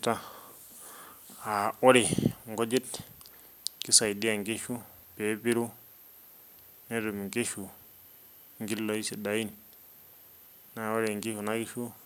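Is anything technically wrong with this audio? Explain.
No, nothing technically wrong turns up anywhere in this speech recording, so there's nothing here to flag.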